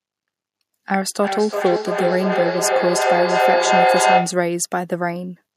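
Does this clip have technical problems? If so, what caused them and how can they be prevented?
Yes, there's feedback echo between two devices from 1.23 to 4.52 s. The speech keeps coming back every third of a second or so and builds up to about 4 dB above the talker, because a second device in the room replays it into the microphone. Muting or headphoning the extra device fixes it.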